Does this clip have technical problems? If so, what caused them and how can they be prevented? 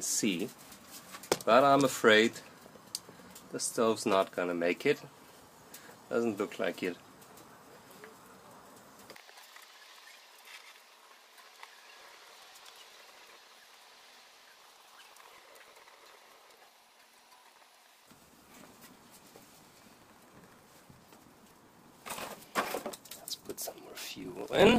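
Yes. Block size mismatch (truncated) from 11.99 s to the end: each block's tail is dropped, causing a 43.1 Hz buzz and 1.12 times faster playback at normal pitch, which fits a 1024-sample read. Prevent it by matching block sizes between stages or buffering leftover samples rather than discarding them.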